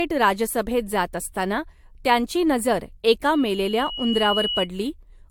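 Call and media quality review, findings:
Generation loss: likely repeated AAC-LC re-encoding at 96 kbit/s, around three passes, each requantising on a shifted frame grid. Throughout, speech sounds swirly, hollow and smeared, with softened consonant attacks and nothing above 19.1 kHz.

Loudspeaker feedback squeal: mic-to-speaker loop gain exceeds unity at 2.9 kHz, 3.33 to 4.68 s. A single tone swells over roughly a second into a squeal about as loud as the speech before stopping.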